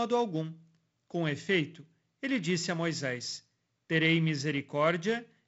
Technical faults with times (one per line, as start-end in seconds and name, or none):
none